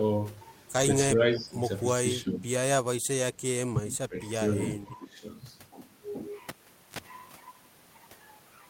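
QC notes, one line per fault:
1.14 to 5.23 s, speech suppressed in double talk: the voice dips at 1.14–1.55, 2.23–2.43, 3.73–3.83, 4.08–4.40 and 4.71–5.23 s, by about 5 to 15 dB, deepest near 3.8 s. This is likely an echo canceller ducking the near talker while the far side spoke.
6.49 to 6.99 s, cable pulled and plugged in: a pop opens about 0.45 s of near silence, then roughly 50 ms of 50 Hz mains buzz as only the plug tip makes contact, and a second pop as the signal returns.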